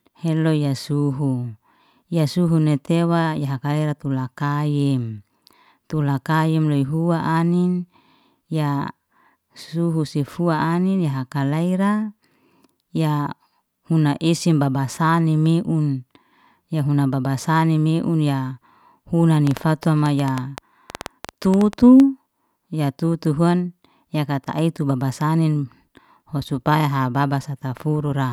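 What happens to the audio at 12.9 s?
Nothing goes wrong at 12.9 s; the speech carries on intact through that moment, with no dropout, click or distortion to be heard.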